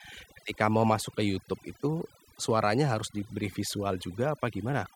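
Overdone noise removal runs through the whole clip: aggressive band-by-band suppression leaves near-silent gaps with twinkling specks, and quiet parts of the speech are stripped away along with the noise.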